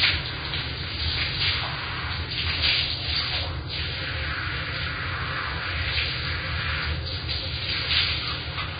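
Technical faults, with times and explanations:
Throughout, Vorbis compression: nothing above 4.9 kHz, with grainy hiss and smeared attacks, likely heavy Vorbis coding near 17 kbps turning coarsely quantised treble into noise.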